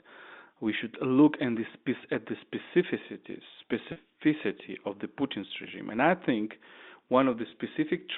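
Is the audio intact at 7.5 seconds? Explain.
No. From 7.50 to 7.52 s, about 20 ms of speech drops out, which fits a single lost packet. In this packet loss with pitch repetition, the receiver replays the last pitch period, so the audio sounds briefly held and buzzy rather than silent or clicking.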